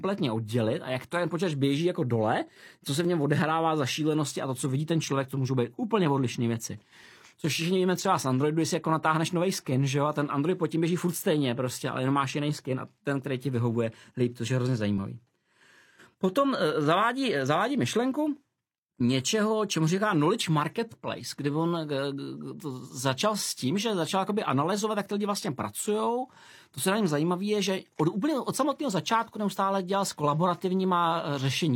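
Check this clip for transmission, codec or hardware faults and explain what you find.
One fault appears in the speech: overlap between stream segments, at 1.05, 3.05, 5.04, 7.04, 9.03, 12.98 and 14.98 s. Adjacent 2-second segments claimed overlapping time, so the player discarded roughly 30 to 40 ms of genuine sound at each seam, producing a small click or skip where the waveform jumps.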